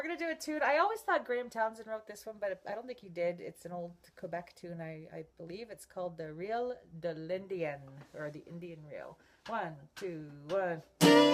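Nothing stood out as a technical problem on listening.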